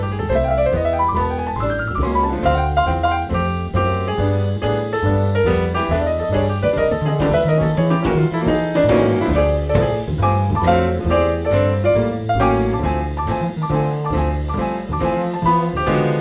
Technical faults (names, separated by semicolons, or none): none